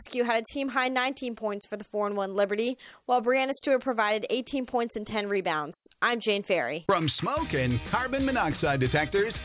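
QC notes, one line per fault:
Nothing here needs flagging; the audio sounds fine all the way along.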